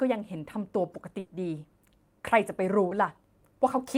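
Around 1.19 s there's a burst of packet loss lasting about 0.12 s: roughly 100 ms never arrived, so the receiver stretched the last sound, fading it out, before jumping ahead with that stretch gone. At 2.89 s comes a short concealed packet loss, about 20 ms filled by extrapolating the preceding sound, heard as a quick smear before the real audio blends back.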